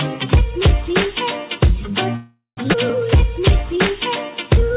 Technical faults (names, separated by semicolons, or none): call audio freeze; skip ahead; jitter buffer slow-down